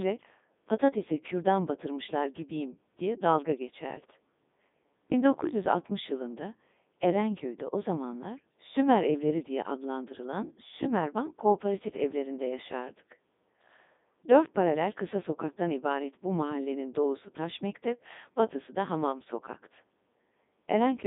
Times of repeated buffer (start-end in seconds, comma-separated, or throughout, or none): none